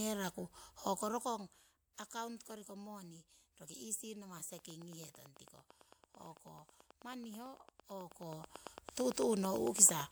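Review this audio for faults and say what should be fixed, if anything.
From 4.59 s to 10.01 s there's a train of clicks, about fifty of them, ticking over the speech at a steady 9 per second and peaking roughly 10 dB above it. A repeating pulse like that most likely comes from interference from nearby gear or a faulty connection or power supply. To prevent it, move the recording chain away from noisy equipment and check the interface's connections and power.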